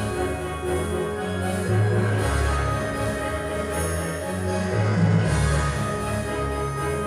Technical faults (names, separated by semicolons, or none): none